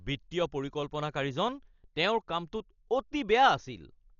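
From start to finish the speech is heavily damaged, with nothing above 7 kHz and a rough, fluttering noise hanging around voiced sounds, likely Dolby Digital compression at a rate that fits about 40 kbps. Unlike a plain low-pass filter, the missing spectral lines are filled with dither noise, which produces that grainy shimmer.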